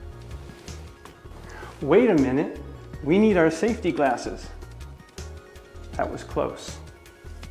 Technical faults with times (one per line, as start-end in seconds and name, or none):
none